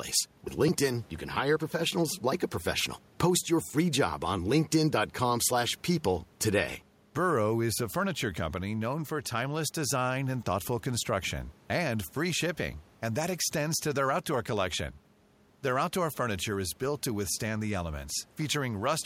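No technical faults are audible.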